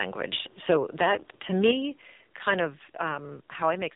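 Throughout, the speech carries AMR narrowband mobile codec damage: nothing passes above 3.8 kHz, and heavy vocal-tract modelling leaves it buzzy and synthetic, which fits a low 5.9 kbps mode. Simple telephone band-limiting would sound dull but stay natural, without this buzz.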